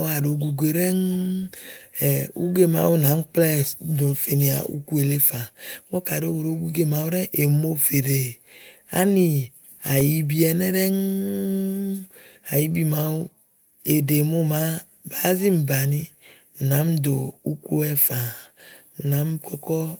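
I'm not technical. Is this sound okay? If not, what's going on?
No. This speech has clock drift between sender and receiver. The sending device's clock runs about 2% slow. So the audio arrives a little too slowly, and the receiving end keeps running short of sound to play.

To cope, the receiver makes repeated timing corrections from 0.22 s to 18.91 s. It repeats tiny bits of sound, adding roughly a third of a second overall. The speech plays at 98% speed. You may hear slight hiccups or an uneven pace.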